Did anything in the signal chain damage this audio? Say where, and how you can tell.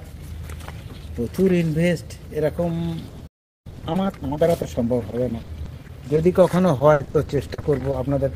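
Yes. From 3.09 s to 8.17 s the sound turns choppy, with dozens of short holes spread across the stretch, none longer than about 70 ms. About 750 ms goes missing in total. This is repeated packet loss on the network path. Each dropout is papered over by extending the preceding sound, and another dropout arrives before the ear settles. Roughly half a second is reconstructed, which gives the robotic texture.

At 3.27 s the audio cuts to silence mid-flow and stays dead for about 380 ms, resuming at 3.67 s. That is a playback stall. The output had nothing to play, most likely because the player's buffer ran dry while incoming data was delayed, and it held silent until enough arrived to continue.

From 3.67 s to 4.43 s the sound rushes forward at about 1.5 times normal speed, yet the pitch stays put. This is time-compressed catch-up in the playback stage. To recover the backlog built up during the stall, the player snips out small slices and cross-fades the joins, shortening the material without transposing it.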